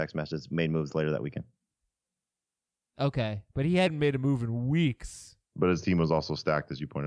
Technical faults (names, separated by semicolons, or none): wrong sample rate